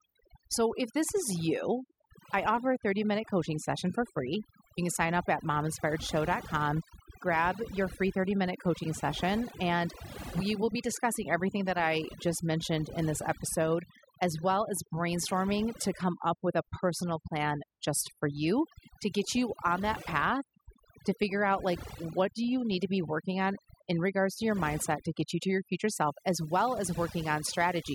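From the start of the speech, overdone noise removal is audible. The noise reduction stage treated any frequency band close to its noise estimate as noise and cut it far down or out entirely. The background therefore sits low but breaks up into twinkling, warbling specks as individual bands switch on and off. The quieter parts of the speech that fell near that estimate were cut along with the noise.

At 25.9 s, right after "you to your future", mains buzz comes in and continues to the end of the clip. It sits at roughly 20 dB below the speech. The buzz is built on 60 Hz mains. Sharp switching spikes, from a dimmer, a rectifier or missing shielding, arrive twice per cycle and spread harmonics up into the kilohertz range. The result is a steady, raspy buzz under the speech.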